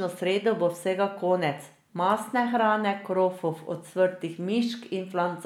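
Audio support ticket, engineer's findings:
Listened through the speech recording and nothing stood out; no findings to log.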